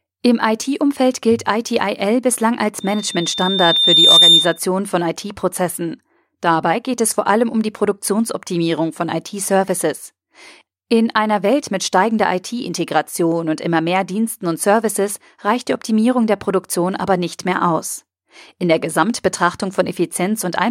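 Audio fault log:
2.80–4.59 s, loudspeaker feedback squeal: a 3.6 kHz tone swells over roughly a second and a half to about 10 dB above the speech, as the mic-to-speaker loop gain exceeds unity.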